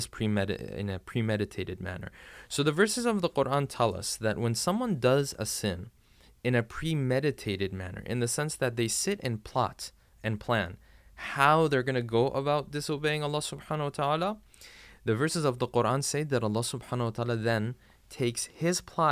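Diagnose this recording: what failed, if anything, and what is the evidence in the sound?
Nothing in this speech recording points to a failure at any stage, so there's nothing here to diagnose.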